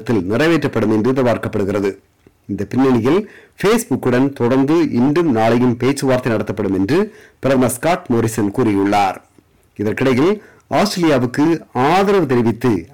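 Hard clipping runs through the whole clip: the signal reaches the stage about 11 dB hotter than it can pass, so roughly a fifth of all samples are sheared flat at the ceiling, adding high harmonics that turn every loud moment into a harsh, buzzing fuzz.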